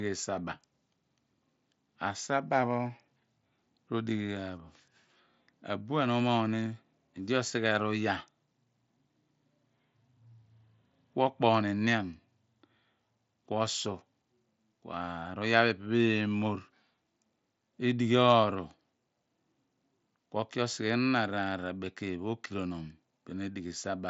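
No technical faults are audible in this speech.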